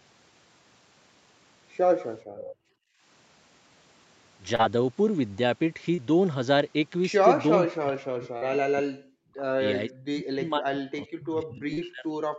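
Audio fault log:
2.25–2.38 s and 2.55–3.03 s, background gated by the echo canceller: The room sound behind the speech is pushed down while the far end's loudspeaker plays, by about 19 dB in the first stretch and about 37 dB in the second, lasting about a sixth of a second and then about half a second. On a spectrogram the low-level noise floor goes dark in blocks with abrupt edges. On the waveform the quiet background collapses toward silence and then snaps back when the canceller releases.
2.38–2.55 s, echo leak: Between the two gated stretches, a faint delayed copy of the speech comes through, arriving 492 ms behind the original and sitting roughly 15 dB below it. It sounds like a ghost repeat. The likely cause is a loudspeaker-side echo canceller that failed to remove everything its microphone picked up and sent the remainder back. A spectrogram shows a weaker duplicate of the earlier harmonic pattern shifted half a second later in time.
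4.55 s, 5.95 s, 8.38 s and 11.73 s, short concealed packet loss: At each of these points about 40 ms of audio never arrived in time, and the decoder filled 30 to 38 ms of the gap by extending the preceding sound before blending back. Each one is heard as a brief smear or wobble, and a short consonant can go missing. A spectrogram shows harmonics running flat and smooth for a few hundredths of a second. The waveform shows a repeated, slightly decaying cycle where the fill sits.
7.62–9.62 s and 9.88 s to the end, speech suppressed in double talk: Across these two long stretches the speech dips hard, by around 40 dB at its deepest. This is likely the echo canceller clamping down because both sides were talking at once and it could not separate the local talker from the loudspeaker echo. The waveform envelope sinks deeply in these stretches.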